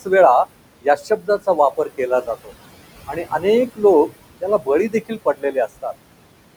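Noise suppressor artifacts run through the whole clip. Background noise, about 15 dB under the speech, is pulled down about 21 dB. Speech cut by the noise suppressor follows at 0.82–2.0, 2.22–2.52, 3.07–3.45, 3.67–3.83, 4.41–4.68 and 4.89–5.85 s. The suppressor mistakes soft speech for noise, dropping it up to about 21 dB, so fragments sound swallowed.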